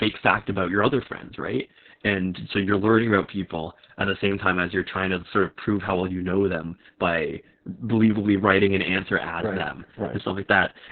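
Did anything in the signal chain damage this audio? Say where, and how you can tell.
Yes, at the codec stage, throughout the clip: Opus voice compression. Nothing survives above about 4.3 kHz, so the speech is narrowband and muffled, with a hoarse, slightly robotic edge. That points to SILK coding at a very low bitrate, around 6 kbps, with coarsely quantised excitation.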